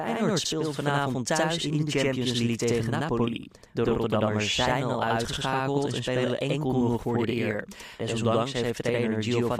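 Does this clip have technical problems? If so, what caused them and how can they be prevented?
Yes. Throughout the speech there is a channel delay causing doubling: every syllable is followed by a second copy at the same level, heard as a tight slap echo. One channel arrives about 85 ms late, and when the two are summed to mono the late copy sits far enough behind to be heard separately rather than blending in. The offset fits a 4096-sample buffer at 48 kHz. To prevent it, keep both channels on the same buffer path and check inter-channel alignment before any mono fold-down.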